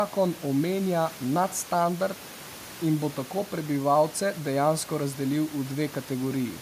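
Speech with room noise sitting about 20 dB below the voice, and no technical fault anywhere in the recording.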